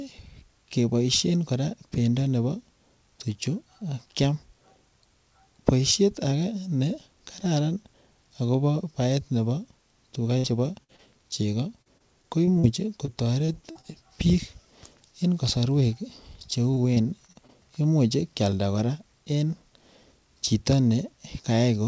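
Burst of packet loss hits this speech recording at 10.38–10.46 s and again at 10.84–10.91 s, just after "tuga chebo". In each case the receiver stretched the last sound for about 50 to 60 ms before letting it fade, so the held tail replaces 40 to 60 ms of missing speech. Short concealed packet loss follows at 10.96–11.01 s and 13.05–13.09 s. Each time, roughly 20 ms never arrived and was patched by continuing the preceding sound, leaving a brief smear rather than a clean gap. Repeated packet loss (robotic sound) runs through 11.82–12.65 s with five gaps, 13.45–13.85 s with four, and 16.71–17.51 s with seven, between "en kosorwek che" and "imuch kyalda". Holes of up to 40 ms recur so closely that the patches leave the audio choppy with pieces missing. Throughout, the band stops at 8 kHz, consistent with a wideband call codec.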